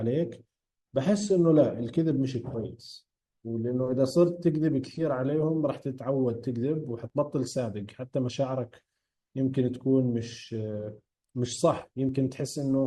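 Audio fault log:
7.10 s and 12.09 s, overlap between stream segments: each time, about 3 ms of speech is dropped where two segments' timestamps claim the same stretch, so the waveform jumps and gives a tiny skip, which fits boundaries of 1 s stream segments.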